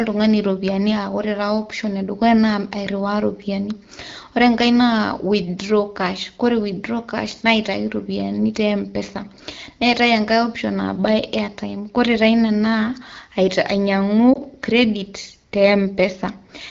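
At 14.33 s, running to 14.38 s, there are lost AMR speech frames. The dip is short, which fits a single missing 20 ms frame. A radio error corrupted that frame, so it failed its checksum. The decoder then stood in for it by repeating the last good pitch and vocal tract settings at lower gain. The result is a brief sag in level. The speech then comes back weak or rough for a moment. The AMR wideband (HD Voice) codec runs at a rate that fits 12.65 kbit/s, and around the dropout its coding damage is only light.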